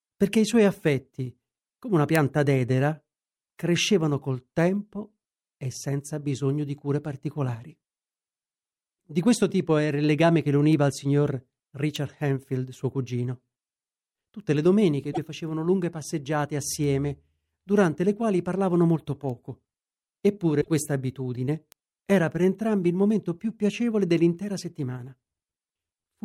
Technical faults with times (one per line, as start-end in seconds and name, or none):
15.09-15.18 damaged data in a compressed stream
20.57-20.68 damaged data in a compressed stream